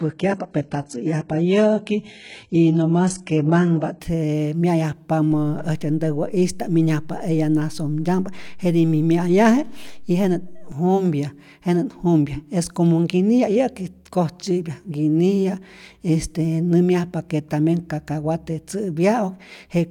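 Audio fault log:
0.0–4.0 s, adaptive stream starting at a low bitrate: the opening four seconds of speech are thin and smeared, with nothing above 11.1 kHz and the upper band sounding synthetic rather than real, which points to a very low-bitrate HE-AAC version, around 12 kbit/s. Once the player had gauged the connection it moved to a richer stream, consistent with AAC-LC near 96 kbit/s, so clarity jumps abruptly at 4.0 s without any break in the audio.
5.32–10.72 s, DC step: at 5.32 s the waveform's zero line suddenly shifts to an offset, heard as a low thump, and by 10.72 s the offset is gone. The speech itself continues unaffected throughout. The thump comes from the abrupt change in the signal's resting level, not from anything in the recorded sound, much as when a converter recalibrates or an input carrying an offset is switched in.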